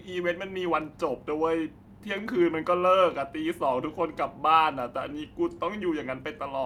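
Clock drift between sender and receiver runs through the whole clip: the sender's clock is about 2% slow, so the jitter buffer keeps draining. On a waveform, tiny duplicated slivers appear, and spectrogram harmonics show faint discontinuities where the buffer is topped up.

From 0.52 s to 6.34 s, repeated timing corrections stretch the speech to 98% speed, adding roughly a tenth of a second overall. Short pieces are repeated at uneven intervals, heard, if at all, as slight hiccups or an unsteady tempo, with small seams in the waveform.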